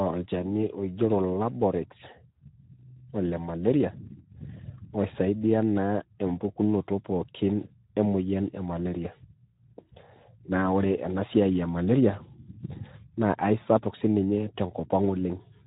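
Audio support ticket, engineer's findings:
Speex codec damage across the whole speech clip. Voice sounds hoarse and grainy. Plainly audible throughout. Nothing above 3.8 kHz; top end gone, so sibilants are dull. Cause: CELP encoding starved of excitation bits, so the pulse detail is replaced by coarse, noisy approximation. Degree of damage fits a low setting around 11 kbps. Probable component: Speex encoder.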